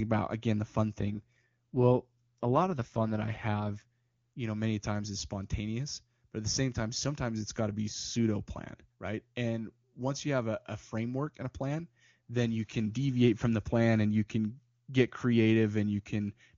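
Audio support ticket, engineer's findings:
AMR rate drop, 1.0–3.85 s, between "about again the fun" and "you know many times". Speech turns rough and synthetic; band unchanged, no gap. Network rate adaptation on a weak radio link: AMR-WB stepped from 23.85 to 8.85 kbit/s, bits shifted to error protection, then restored.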